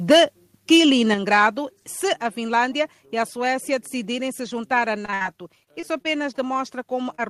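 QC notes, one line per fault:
1.14 s, microphone volume stepped down: the speech and background drop together in one sudden step of about 5 dB, with no fade. The likely cause is the call software judging the input too hot and lowering the device's input volume in a single move.
1.33–1.47 s, microphone overload: just before "se a", the loudest syllable gains a harsh, crackly edge as its peaks flatten, pushing about 2 dB past the converter's limit across a small fraction of samples. This is likely input gain set too high, so the converter clipped the waveform tops.
5.05–6.57 s, repeated packet loss (robotic sound): right after "decidirem se juntar à", the speech turns choppy, with around a dozen dropouts, the longest 61 ms. About 16% of this stretch is patched by stretching the previous sound, so fragments repeat mechanically and pieces vanish.
7.15–7.20 s, short concealed packet loss: a brief smear, about 28 ms long, where roughly 20 ms of audio arrived too late. 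The decoder extended the preceding sound to cover the hole and blended back in, leaving a wobble in place of the lost detail.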